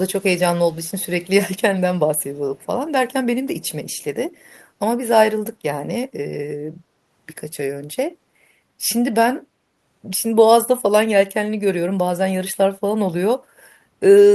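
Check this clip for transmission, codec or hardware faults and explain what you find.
Two faults are present: repeated echo leak in the first five seconds, and one brief dip from background gated by the echo canceller near the end.

Echo leak at 0.19–0.24, 0.55–1.06, 2.06–2.24, 2.57–2.66, 3.65–3.70, 3.90–4.04 and 4.52–4.64 s: a faint copy of the speech trails 253 ms behind, about 35 to 40 dB down. This is likely loudspeaker pickup that the far side's echo canceller failed to remove. On a spectrogram it appears as weak ghost harmonics shifted a quarter-second later.

Background gated by the echo canceller at 13.39–13.58 s: the canceller clamps the microphone, and the room tone drops by up to about 10 dB for about a fifth of a second before recovering. The waveform's noise floor shows a short notch there.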